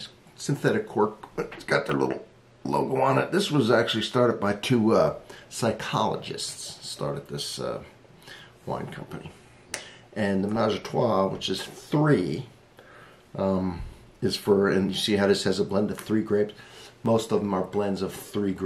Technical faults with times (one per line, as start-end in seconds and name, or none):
1.89-17.06 clock drift buffer slips